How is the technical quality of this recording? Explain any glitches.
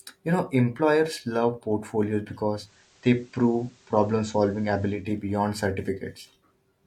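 The recording has one glitch. From 2.51 to 5.1 s, digital radio blends to analogue FM over 223 ms. Hiss rises, around 35 dB below the speech. Level shifts about 1 dB.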